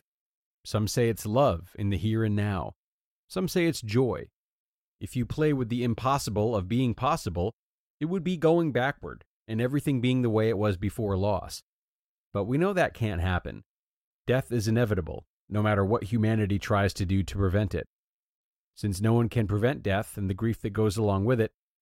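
No technical faults are audible.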